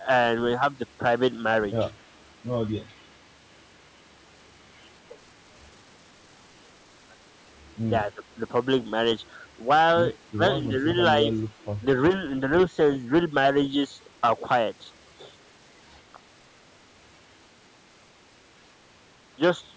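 A speech recording with two kinds of call-path fault. An echo leak appears at 2.01 to 2.23 s and again at 11.57 to 11.65 s: a very faint copy of the voice trails the original by 231 ms, likely from a loudspeaker echo the far end's canceller failed to remove. The fixed delay and the repeated sound set it apart from room reverberation. Speech suppressed in double talk appears at 8.05 to 8.23 s, with the voice dipping by roughly 15 dB, and at 10.69 to 10.87 s, dipping by roughly 10 dB, each lasting about a fifth of a second. The likely cause is an echo canceller turning down the talker while both sides spoke at once. The dips fall during overlapping speech, which sets them apart from network dropouts, which leave gaps unrelated to the other talker.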